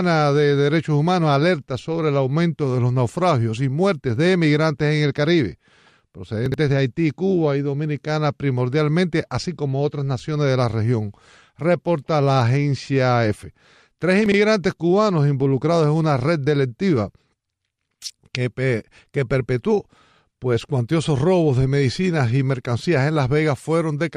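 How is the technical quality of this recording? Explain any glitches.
The recording has two brief glitches of the same kind, chunks out of order, at 6.46 to 6.54 s and 14.26 to 14.34 s. In each, one 20 ms chunk plays three chunks late, creating three hard joins heard as a jumbled moment. Unlike a dropout, no audio is missing, only reordered.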